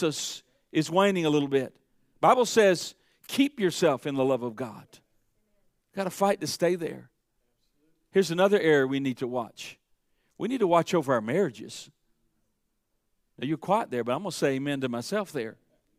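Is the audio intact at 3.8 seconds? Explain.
Yes, the speech runs cleanly through 3.8 seconds, with no audible break, distortion or other technical fault at that point.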